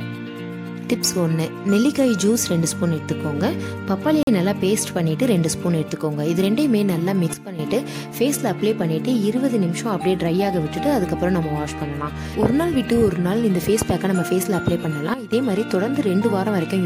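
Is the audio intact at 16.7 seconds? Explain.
Yes, the audio is intact at 16.7 seconds, with nothing there to disturb the sound.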